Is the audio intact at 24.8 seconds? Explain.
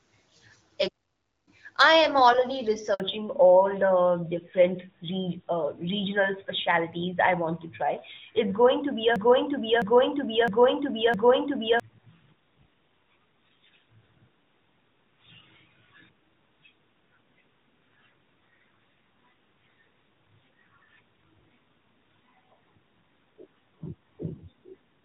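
No. From 3.0 s through to the end, the call is in a fallback to narrowband: the link has dropped from the AMR-WB HD Voice codec to the older AMR-NB narrowband codec, whose sound fits its 12.2 kbit/s mode. That codec carries nothing above 4 kHz, so at 24.8 s the upper speech band is simply gone. The voice sounds duller and rougher, like an ordinary old-style phone line.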